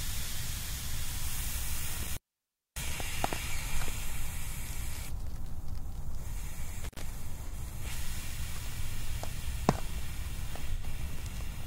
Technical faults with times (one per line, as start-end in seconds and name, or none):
1.91-3.01 intermittent contact
6.84-7.01 intermittent contact
7.48-7.53 AAC frame loss with concealment
10.72-10.83 AAC frame loss with concealment